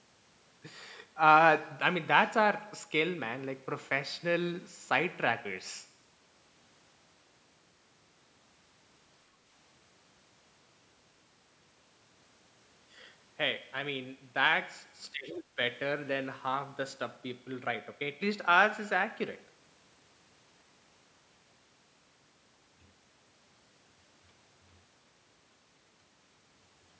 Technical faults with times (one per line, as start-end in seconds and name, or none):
15.12-15.59 speech suppressed in double talk